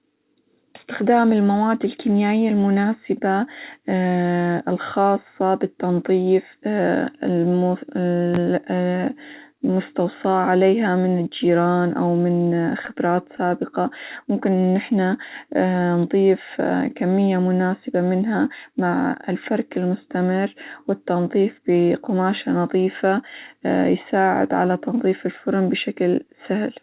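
Scattered short gaps run from 12.56 to 13.54 s, just after "من الجيران أو من". A handful of packets, around seven, arrived lost or late. The receiver bridged each hole by extending the sound it had just played. Each patch is very short, on the order of 10 ms, and together they cover only about 70 ms of the stretch. The speech stays intelligible, but small ticks and hiccups can be heard.

A jitter buffer slow-down follows from 14.25 to 14.72 s. The receiver's buffer was short of reserve, so it stretched the audio by repeating single pitch periods or slivers of pause over and over, adding 46 ms. That passage plays at 92% speed with its pitch unchanged, so sounds drag slightly and may waver faintly. Throughout, the band stops at 4 kHz, which fits a G.711 mu-law call path at 64 kbps.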